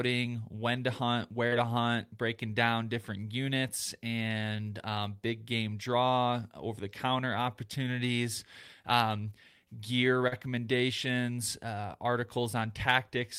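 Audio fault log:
1.47–1.54 s and 10.28–10.34 s, short concealed packet loss: twice, about 40 ms of audio failed to arrive in time, the first just after "when to hunt" and before "to hunt breaking down". The receiver extended the preceding sound and blended back, so there is a brief smear or wobble rather than the dead silence of a plain dropout.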